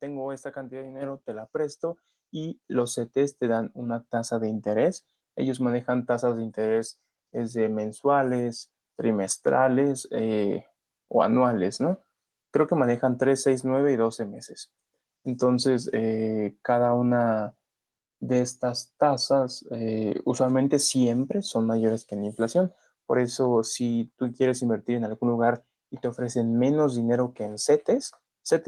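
At 1.02 s and again at 2.04 s, the microphone volume stepped up as the input gain was raised, about 6 dB then about 4 dB, lifting speech and background together abruptly.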